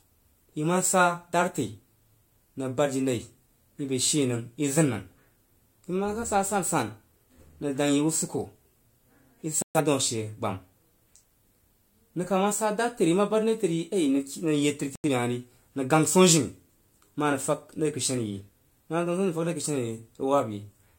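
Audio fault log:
9.62–9.80 s and 14.96–15.09 s, digital broadcast dropout: the speech cuts or quickly fades to silence twice, about 128 ms and 85 ms of sound missing, then resumes further on. The receiver muted on corrupted or missing data, which fits roughly three and two lost frames.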